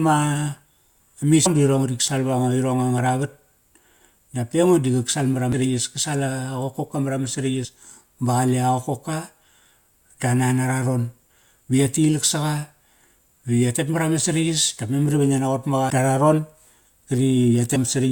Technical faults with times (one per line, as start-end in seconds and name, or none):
1.45 damaged data in a compressed stream
5.52 damaged data in a compressed stream
7.64 damaged data in a compressed stream
15.89 damaged data in a compressed stream
17.75 damaged data in a compressed stream